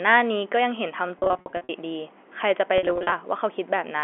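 Telephone-band speech over G.711 coding suffers packet loss with pitch repetition from 1.19 to 1.69 s and 2.78 to 3.12 s: scattered gaps, runs up to 50 ms, bridged by repeated pitch periods that sound buzzy and held.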